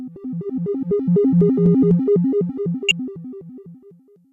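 At 2.88 to 2.91 s, a corrupt frame decoded: flipped bits in a few compressed frames misplace spectral energy, producing a loud chirp, squeak, blip or burst of noise peaking around -5 dBFS.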